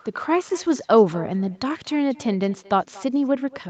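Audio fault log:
Throughout, echo with no canceller: each phrase returns about a fifth of a second later, roughly 24 dB quieter and thin, picked up from a far-end loudspeaker.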